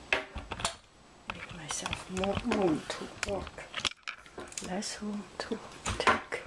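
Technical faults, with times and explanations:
Nothing stood out on listening that would count as a technical fault.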